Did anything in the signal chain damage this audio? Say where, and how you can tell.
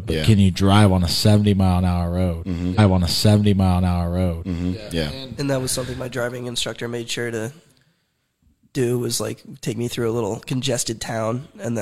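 Yes. A stream segment repeated at playback: from 2.74 s to 4.74 s, about 2.0 s of the speech plays again after a small blip at the jump back. The waveform shows an abrupt discontinuity there, and the spectrogram pattern visibly duplicates as the player queued that segment twice.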